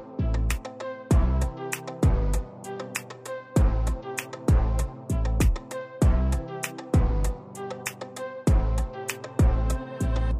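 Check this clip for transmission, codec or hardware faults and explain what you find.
No transmission, codec or hardware faults.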